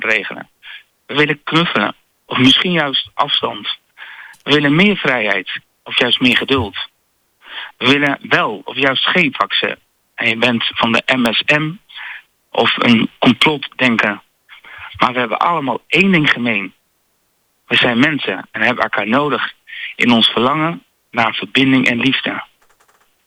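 A nearby switch, motor or static discharge likely arced and coupled into the audio line, producing an electrical switching spike at 8.07 s, a sharp snap peaking around -10 dBFS, then another at 11.26 s, a harder crack peaking around 0 dBFS, both sitting on top of the sound.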